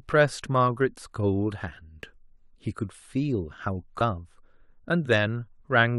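At 4.00 s the speech jumps ahead with a brief blip, likely a stream segment skipped. Unlike a dropout, nothing falls silent; material simply goes missing.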